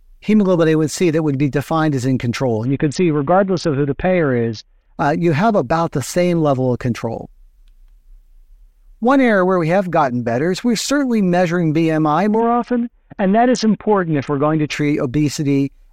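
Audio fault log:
2.66–4.98 s and 12.40–14.72 s, Bluetooth SBC bit pool drop: twice the sound goes dull and gritty for about 2.3 s. The first starts right after "defined as in control" and clears by "uh you have about". The link got congested and the encoder cut its bit budget, which fits a bit pool falling from 28 to 6, around 60 kbps. The top sub-bands lose their bits, so the treble dulls, and the rest is coarsely quantised into grainy noise until the rate recovers.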